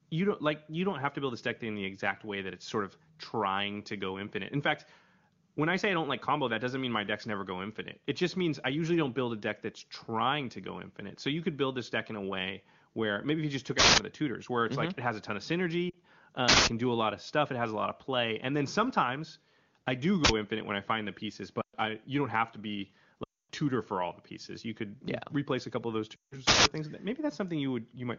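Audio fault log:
13.79 to 26.66 s, uninitialised buffer: at 13.79–13.98, 16.49–16.67, 20.25–20.29 and 26.47–26.66 s, playback was handed a block before any audio had been written into it, so stale memory contents went out as samples. Each one is a sudden, loud burst of digital noise or crack that replaces the speech. Three last about 186 ms, which fits an 8192-sample block, and the one at 20.25 s lasts about 46 ms, which fits a 2048-sample block.
15.89 to 26.35 s, lost AMR speech frames: at 15.89–15.96, 21.61–21.75, 23.23–23.51 and 26.16–26.35 s, speech frames arrived corrupted and failed their checks. The decoder bridged each gap by repeating the last good pitch and vocal-tract settings at falling gain. The 40 ms gap at 15.89 s is two lost frames, enough to drop the sound to near silence. The 120 ms, 260 ms and 160 ms runs drop the sound to near silence within two frames, as wideband concealment does, before the speech returns weak or rough for a moment.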